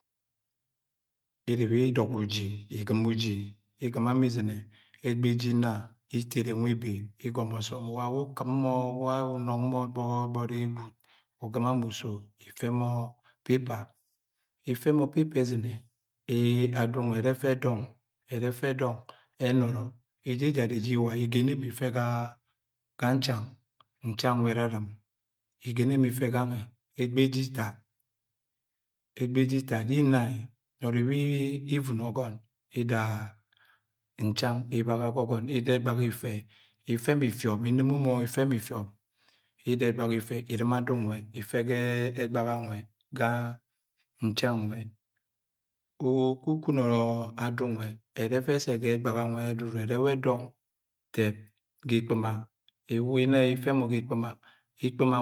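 No technical faults detected.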